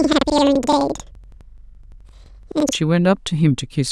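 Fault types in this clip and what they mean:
Planar audio read as interleaved: from the start to 2.74 s the speech sounds an octave high with a flutter. Each block stores all left-channel samples followed by all right-channel samples, but playback treats them as alternating pairs, so each block plays twice at double speed, left then right. The overall pace stays correct. The flutter repeats at about 11.7 Hz, roughly every 85 ms, which fits a 2048-sample block.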